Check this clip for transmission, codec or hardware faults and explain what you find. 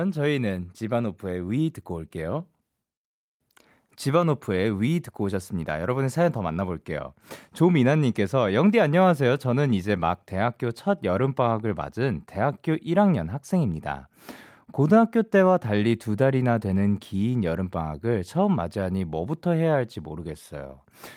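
Nothing wrong turns up anywhere in this speech recording. There is no event in it that needs a time or an explanation.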